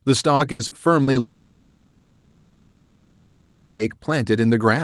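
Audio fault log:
0.35–1.18 s, repeated packet loss (robotic sound): The speech breaks up into a choppy stutter. Five short holes fall in under a second, the longest 80 ms. Together they take about 240 ms, close to a third of the stretch. Each hole is filled by stretching out the sound just before it. Those smeared copies, strung together, give the robotic buzz, and the real speech inside each hole is gone.
1.19–3.82 s, long network dropout: The speech stops for about 2.6 s, and none of what belonged there comes back. In its place the last sound carries on as a buzz that thins out to a low, steady noise for the rest of the gap. A true silence lasts only about 10 ms. The likely cause is audio that never arrived, so the receiver filled the hole with synthetic sound. Through both faults the top end stays capped near 12 kHz, as the call codec's band limit would give.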